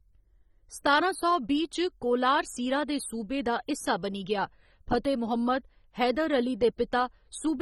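From start to finish the speech has likely passed through AAC compression starved of bits, consistent with AAC-LC at around 24 kbps. Nothing remains above 17.5 kHz, and the damage is plainly audible: a dull, smeared sound with fizzy, warbling sibilants.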